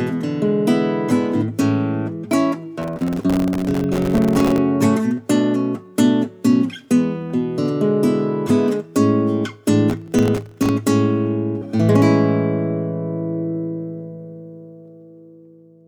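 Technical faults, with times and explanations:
2.82–4.58 s and 9.90–10.69 s, processor overload crackle: the processor keeps missing deadlines for very short buffers, around a millisecond and a half each, leaving many tiny hard-edged silent gaps that fuse into gritty crackle, longer in the first burst, ending when the load passes.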